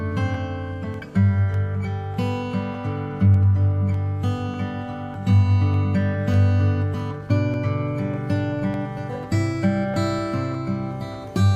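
A likely mismatch between two device clocks, one running roughly 500 ppm off the other, makes the buffer between them creep until a small block of samples, on the order of fifteen, is dropped or repeated. These clock drift buffer slips are heard as a regular click or pop every 0.6 s in the sound, about twenty in all, from 0.34 s to 11.14 s.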